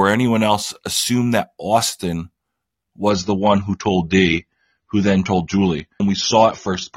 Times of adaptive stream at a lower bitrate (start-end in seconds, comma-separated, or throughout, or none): 3.10-6.96